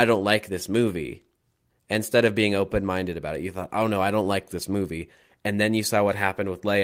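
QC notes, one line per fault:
No faults noted.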